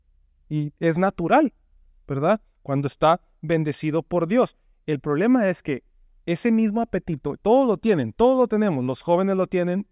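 No technical faults can be heard anywhere in the recording; the speech signal stays continuous and steady in level throughout.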